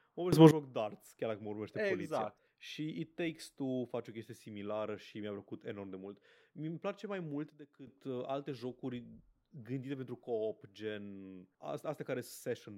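Speech, with two sudden gain jumps where level and background noise step together: up about 19 dB from 0.33 to 0.51 s, down about 12 dB from 7.50 to 7.87 s, likely from unramped digital gain changes.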